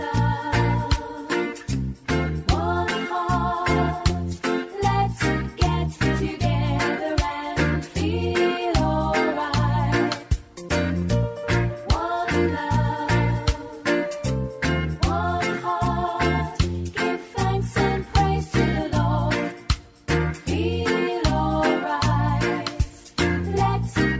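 No dropouts, clipping, distortion or timing errors turn up anywhere in the audio.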